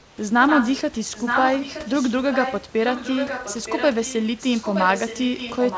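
From 0 to 0.18 s, the opening pause carries comfort noise in place of the background. The room noise, which otherwise sits about 29 dB below the loud parts, is replaced by a smooth, featureless hiss about 4 dB quieter, with none of the real background's texture. This is likely discontinuous transmission: the sender stopped sending during silence, and the receiver generated shaped noise to fill the gap until the audio resumed.

An echo leak follows in four stretches: 0.47 to 0.93 s, 1.13 to 2.71 s, 2.87 to 4.15 s, and 4.37 s to the end. Each is a copy of the speech trailing the original by 920 ms. It runs roughly 5 dB below the direct speech in most stretches and drops to about 10 dB below between 2.87 and 4.15 s. The delayed copy overlaps the live speech, smearing it into a doubled, ghosted sound. Both the copy and the direct speech are confined below 8 kHz, in line with the G.722 call path. 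The likely cause is a loudspeaker at the far end whose echo canceller failed to remove what its microphone picked up, so the call's own audio was sent back.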